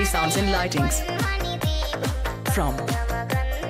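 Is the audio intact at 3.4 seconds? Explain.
Yes, the audio is intact at 3.4 seconds, with no dropout, click, distortion or other fault audible at that moment.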